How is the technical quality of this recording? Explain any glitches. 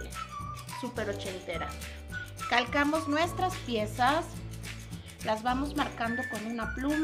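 No glitches can be heard anywhere in the recording. Every part of the audio comes across as intact, with no interruptions or disturbances.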